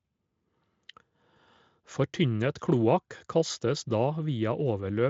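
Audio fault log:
No faults are audible anywhere in this speech recording.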